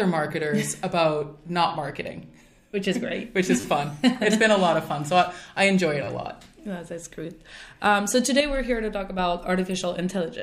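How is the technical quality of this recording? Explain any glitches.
The recording has two kinds of fault: three short stutters from a repeated buffer, and one brief level drop near the end from one channel dropping out.

Repeated buffer, at 1.68 to 1.70 s, 3.60 to 3.64 s and 6.04 to 6.07 s. At each point fresh audio failed to reach the playback device in time, so it replayed the piece it already held. The repeats are very short, which fits a buffer of about 10 ms, and the same fragment plays two, four and three extra times respectively. With joins that close together, each event sounds like a quick buzzy stutter or click rather than an audible echo. The stream picks up afterwards with essentially nothing skipped.

One channel drops out, from 8.40 to 9.19 s. The sound falls abruptly by about 6 dB for roughly three quarters of a second, then snaps back to its earlier level. The likely cause is one stereo channel going missing. 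When the two channels are summed to mono, material common to both loses half its contribution, and anything present only in the lost channel vanishes for that stretch.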